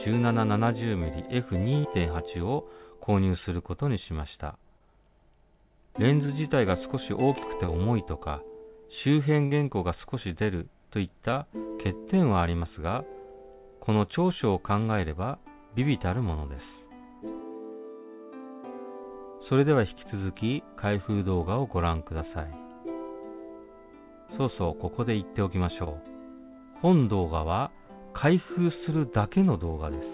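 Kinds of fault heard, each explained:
Burst of packet loss: twice, at 1.78 s and 9.46 s, a run of audio went missing, about 60 ms each time. The receiver stretched and faded the last sound over the hole, then jumped ahead, so you get a brief held buzz or hiss before things pick up slightly later.
Short concealed packet loss: five tiny dropouts, about 20 ms each, at 4.78, 6.26, 7.66, 11.31 and 25.84 s. Each was patched by extending the previous sound and blending back in, heard as a quick smear or wobble over a narrowband, 4 kHz-limited telephone-style sound.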